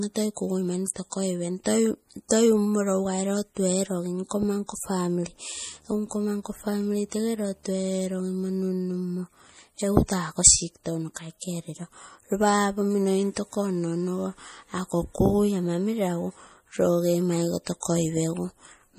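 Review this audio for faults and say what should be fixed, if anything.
The whole clip has a plainly audible watery, swirly quality, with nothing above 15.2 kHz. That points to MP3 compression, likely at a low bitrate around 40 kbps, where the encoder drops weak frequency lines frame by frame and cuts the top end at a fixed point. Record and deliver at a higher bitrate or in a lossless format to avoid this.

From 5.56 to 8.70 s there's a video or display buzz at 75 Hz, the field rate of a screen, sitting roughly 35 dB under the speech. A monitor or video cable is coupling into the audio line there. Keep audio cabling away from displays and video leads, and use balanced or shielded connections.

At 17.80 to 17.83 s there's pre-echo, a 25 ms smear of hiss ahead of an attack. The transform codec spreads the noise for a loud block into the quiet moment just before the onset, so the attack comes out soft. 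A higher bitrate or an encoder with better block switching would keep onsets clean.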